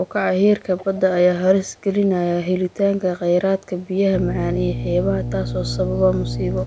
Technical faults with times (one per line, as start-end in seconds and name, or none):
0.77-0.99 echo leak
1.67-1.83 echo leak
2.69-2.74 echo leak
4.12-6.66 mains hum